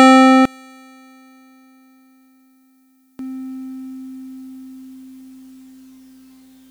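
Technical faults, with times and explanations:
0.45 to 3.19 s, one channel inverted: the music drops by about 30 dB and turns faint, with the centred parts almost gone, leaving only a faint residue until full level returns. The likely cause is one stereo channel flipped in polarity, so when the two channels are summed to mono, everything they share cancels, and only the small difference between them survives for this stretch.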